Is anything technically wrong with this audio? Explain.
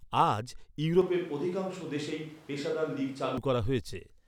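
Yes, there's one problem. From 1.01 to 3.38 s the speech sounds like a switch to a distant microphone: it suddenly turns roomy and hollow, loses bass, drops about 5 dB, and picks up room noise sitting roughly 25 dB under the speech. The likely cause is the close mic dropping out, leaving a farther mic that hears more of the room than the talker. At 3.38 s the close, full sound snaps back just as abruptly.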